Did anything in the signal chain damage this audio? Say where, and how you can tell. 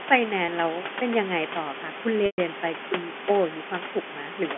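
Yes, at the network stage. At 0.46 to 0.48 s the sound briefly hangs on a slightly buzzy, held tone for about 20 ms. At 2.26 to 2.38 s a longer 120 ms gap starts the same way but fades to silence before the sound cross-fades back in. That is packet loss with pitch repetition. The receiver bridged missing data by looping the last pitch cycle and fading it over roughly 50 ms, which fits one lost packet first and a run of several later.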